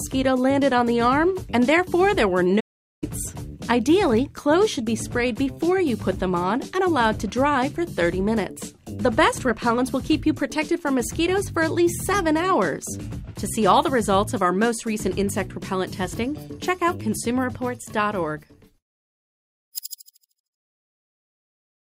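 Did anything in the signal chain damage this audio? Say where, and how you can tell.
Yes, at the playback stage. A playback stall runs from 2.60 s to 3.04 s: the sound stops abruptly mid-flow and the output is silent for about 420 ms before it resumes. The likely cause is the player running dry of buffered data or its output thread being blocked.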